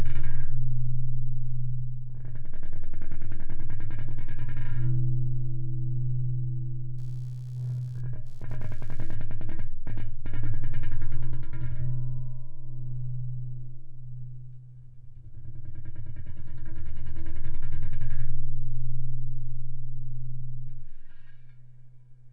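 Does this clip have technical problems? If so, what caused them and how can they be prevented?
Yes. From 6.98 to 9.25 s there is computer activity noise: faint buzzy chirping pulsing about 70 times a second, roughly 45 dB below the sound. It comes from processor or graphics load shifting the audio circuit's shared ground. A spectrogram shows evenly spaced vertical streaks unrelated to the sound. An externally powered interface or a ground-isolated USB connection prevents it.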